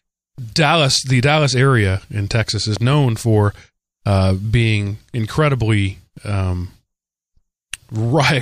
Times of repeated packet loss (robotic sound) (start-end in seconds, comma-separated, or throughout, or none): none